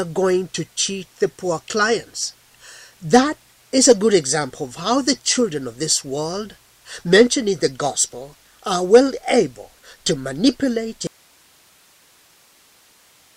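At 11.07 s the sound cuts off abruptly and never returns, leaving only a thin hiss about 35 dB below the earlier level through to the end. It is an audio dropout to a faint residue, likely a lost source while the downstream path stayed live.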